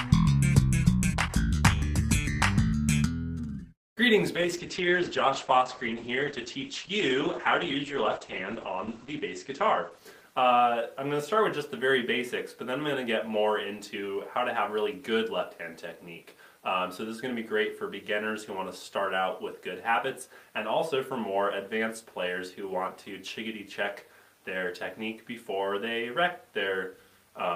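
At 4.36 s there's a call bitrate drop. The bandwidth estimate collapses and the encoder is starved of bits, so it codes everything more coarsely and pulls the top end in from about 20 kHz to 8 kHz. The sound goes dull and watery. It's roughest for around 4.6 s, which points to a fall from roughly 40 to about 9 kbps, and it recovers by 11.79 s.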